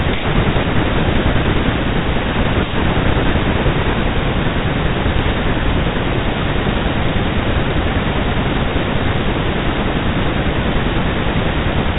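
At about 5.18 s the speech breaks up for roughly 90 ms, until 5.27 s, with a cluster of bit errors on an ADPCM link. The stream sounds like it took around half a percent of flipped bits. Because ADPCM sends only differences from a prediction, each bad bit knocks the decoder's step size and predictor off track, so instead of a clean click you get pops and a rough, gravelly burst with the level briefly jumping. The underlying 32 kbit/s G.726 sound stays band-limited at 4 kHz.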